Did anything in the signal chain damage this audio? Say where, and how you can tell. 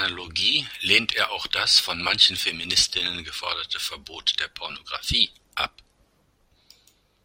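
No, nothing in the chain from capture to playback has left an audible mark on this speech recording. At no stage can a listener hear damage added by wiring, conversion, processing, transmission or storage.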